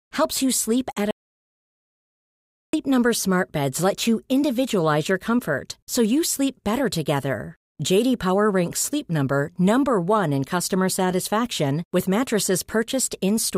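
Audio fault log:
1.11–2.73 s, audio dropout to silence: the speech stops abruptly mid-flow and returns just as suddenly after about 1.63 s of digital silence, with no room tone or hiss in the gap, so that stretch of speech is simply gone. The likely cause is the input being lost, through a dropped connection or an accidental mute, while recording carried on writing silence. Unlike a noise gate or fade, there is no ramp and no residual background.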